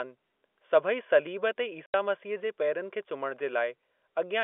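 Packets were dropped on the way to the receiver, which filled the hole with silence. This speech clip, carried over G.711 telephone coding with its narrow 300 Hz to 3.5 kHz band, goes dead for 80 ms from 1.86 to 1.94 s, just after "सलीब ते". The gap has hard edges, and its length fits four lost 20 ms packets.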